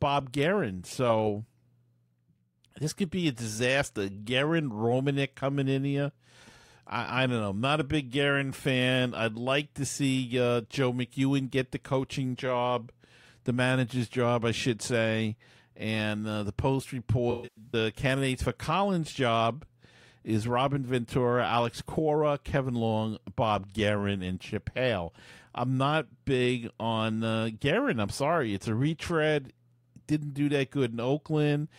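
Speech with AAC frame loss with concealment at 17.31–17.74 s: about 0.3 s of frames dropped, the longest run around 150 ms, filled in as a smeared, noisy patch.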